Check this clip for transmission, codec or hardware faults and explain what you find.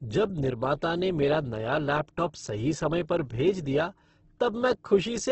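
Opus compression, likely the cause, runs throughout the speech. Nothing reaches above about 8.2 kHz, which points to a wideband setting at a low rate, around 12 kbps. In its music mode the encoder keeps each band's energy but, short of bits, fills band detail by folding lower bands or inserting noise. Heard here, the damage is heavy, with a rough, grainy texture. A spectrogram shows a hard ceiling near 8.2 kHz with smeared, noise-filled bands below it rather than clean harmonics.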